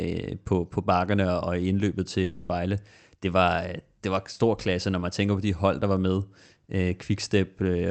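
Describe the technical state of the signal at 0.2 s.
At 0.2 s the speech is intact, with no fault present beyond the ordinary coding character of the call path it travels through.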